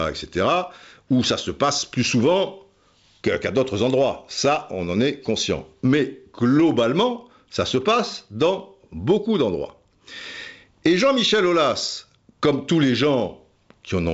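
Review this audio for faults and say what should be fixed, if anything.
Nothing in this recording needs fixing. The speech carries the sound of G.722 wideband telephone coding at 64 kbit/s, with nothing above about 7.7 kHz and at most a faint trace of the coding in the upper band.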